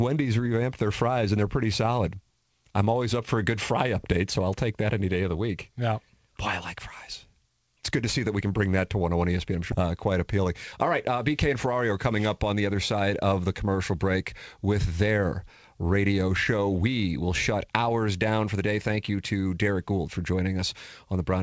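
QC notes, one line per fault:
9.72 s, skip ahead: playback jumps straight to "uh quite" with no silence or fill, dropping roughly 0.7 s of speech as a stretch of audio is dropped while later audio is already waiting. Unlike a dropout, there is no gap. The two sides butt together.
11.66–13.40 s, jitter buffer speed-up: speech runs about 9% fast, leading into "the commercial", as the receiver trims pitch-period slices, roughly 150 ms in total, to shrink an oversized buffer. Pitch stays unchanged, which separates this from a resampling or tape-speed error. It sounds hurried rather than higher.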